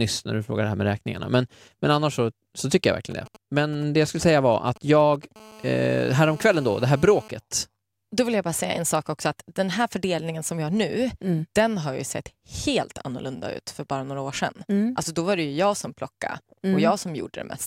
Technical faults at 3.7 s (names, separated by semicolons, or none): GSM signalling bursts